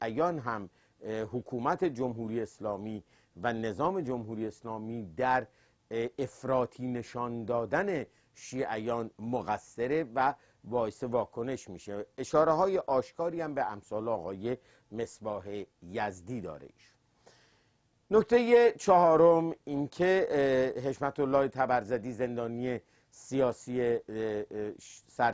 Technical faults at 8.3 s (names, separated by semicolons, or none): none